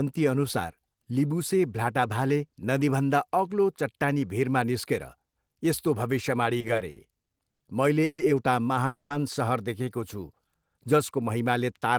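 Repeated stalls (stutter) run from 6.59 to 7.62 s, between "यस्तो भविष्यवाणी" and "मैले एउटा". Packets kept arriving more slowly than they were played, so the jitter buffer emptied eight times. Each time the receiver stretched the last sound to fill the wait, up to 90 ms at a time and about 250 ms in all, roughly a quarter of that stretch. Nothing is lost, but the speech drags and judders.

A call audio freeze follows at 8.04 to 8.20 s, and another at 8.86 to 9.12 s, just after "मैले एउटा". Each is likely caused by packets held up in transit, leaving the jitter buffer empty. The receiver extends the last sound as a fading buzz or hiss for 140 ms, the final 40 ms silent, and then for 240 ms, with 130 ms silent. The speech resumes where it stopped, now 140 ms and then 240 ms later.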